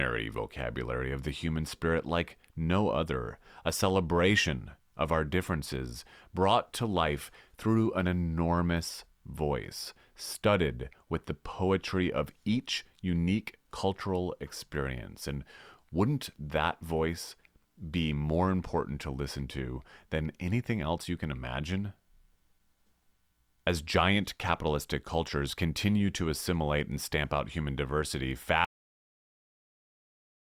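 At 28.65 s the speech has a cut-off end: the final buffers never played, so sound halts mid-utterance into digital silence, showing as an abrupt flat line with no decaying tail.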